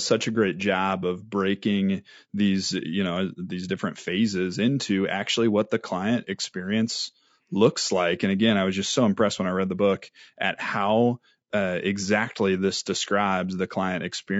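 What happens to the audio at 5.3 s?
At 5.3 s the speech sounds rough and grainy, with a hiss filling the gaps between the pitch harmonics and a thin, synthetic top end. That's not a one-off event; it runs through the whole clip. The likely cause is low-delay AAC compression of the AAC-ELD kind used in video calls, at a rate that fits roughly 32 kbps. At that low bitrate the coder can't spend enough bits on the harmonics cleanly, so the coder smears noise into the spectrum and skimps on the highs.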